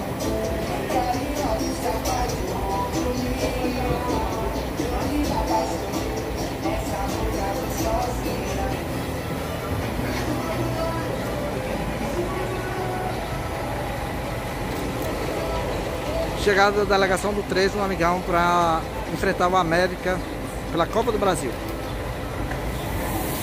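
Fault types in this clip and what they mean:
Nothing here to flag: no fault of any kind turns up anywhere in this audio, so there's nothing to list.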